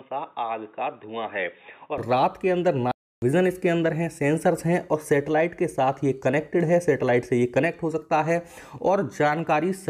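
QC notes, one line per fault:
0.00–1.98 s, input switched to a poorer device: the recording likely began on a lesser input, such as a headset call profile, before moving to the main microphone at 1.98 s. Until then the band is narrower, so the sound is dull and boxy, sits roughly 10 dB quieter, and carries faint background noise well below the signal. At 1.98 s the full band, level and clarity return at once, with no gap at the changeover.
2.92–3.22 s, playback stall: the player likely ran short of data or had its thread held up, so output stopped feeding the speaker for about 306 ms. The sound cuts off abruptly in mid-flow, leaving a clearly audible hole of roughly a third of a second, then picks up again at 3.22 s. The hard edges on both sides make the break sound like a dropout in delivery rather than a pause in the material.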